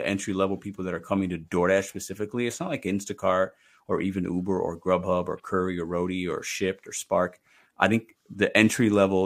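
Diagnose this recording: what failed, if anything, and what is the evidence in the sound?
No fault detected in this recording.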